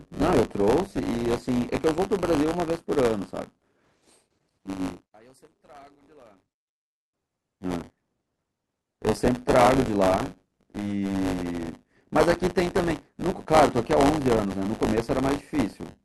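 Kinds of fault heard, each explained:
Buffer tearing: A steady robotic buzz at 100 Hz rides on the speech throughout and is present only while sound plays. The writer and reader of the ring buffer have slipped, so about a tenth of each period repeats audio some 20 ms old, with hard joins.
One channel inverted: From 5.05 to 7.14 s the speech nearly vanishes, dropping about 31 dB and leaving only a faint remainder. The likely cause is reversed polarity on one stereo channel, so the shared centre content cancels when summed to mono.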